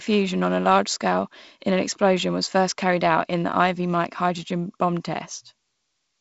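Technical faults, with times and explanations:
No technical faults are present; the speech carries the light coding texture of G.722 wideband telephone coding at 48 kbit/s, with a slight hiss from the coarsely coded upper band and a fuller-band signal that reaches up to 7.7 kHz with nothing above it.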